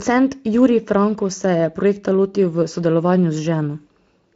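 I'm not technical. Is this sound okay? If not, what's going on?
Yes, this speech recording is in sound technical shape, with no problems to point to.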